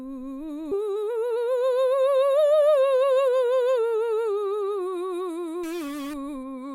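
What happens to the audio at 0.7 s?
At 0.71 to 0.73 s the music skips ahead: roughly a second and a half of audio was discarded, likely when an overflowing jitter buffer dropped it, and playback jumps straight on with no silence. A waveform or spectrogram shows an abrupt seam where unrelated material butts together.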